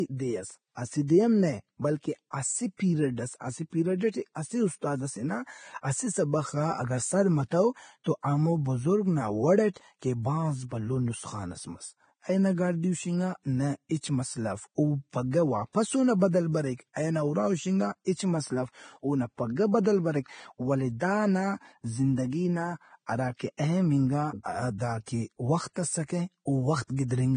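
From start to finish the speech carries heavy codec damage. Nothing is left above 9.7 kHz. The treble that remains sounds hissy and grainy rather than crisp. Consonant attacks are smeared. Tonal parts of the voice have a rough edge. The likely cause is Vorbis compression at low quality. The encoder lowered its cut-off and quantised the upper residue so coarsely that fine detail became noise-like texture. The damage fits a bitrate in the low twenties of kbps.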